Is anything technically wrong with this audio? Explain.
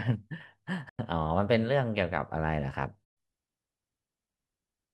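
Yes. The speech cuts out to silence twice, from 0.89 to 0.99 s and again from 3.05 to 3.17 s. After each gap the speech resumes further along, as though about 93 ms and then about 116 ms had played unheard. This pattern points to a likely Bluetooth dropout, where audio packets arrive too late and are discarded. The gap lengths fit four and five lost packets.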